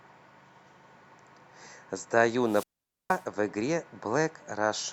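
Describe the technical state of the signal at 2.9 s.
A wireless microphone squelch dropout runs from 2.44 to 3.25 s, so at 2.9 s the signal is in its muted stretch. The radio link from the FM transmitter fades too weak for the receiver, whose squelch shuts the output off for about 0.47 s. A brief swell of hiss and static leads into a hole of near silence before the speech resumes.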